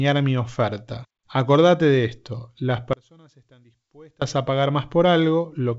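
From 2.93 s to 4.22 s the speech drops by about 29 dB, leaving only a faint residue before full level returns. The likely cause is one channel inverted: with one stereo side in reversed polarity, the centred voice common to both cancels on summing to mono, so only the small difference between channels survives. The band-limited G.722 character, with nothing above 7.7 kHz, continues through the dip.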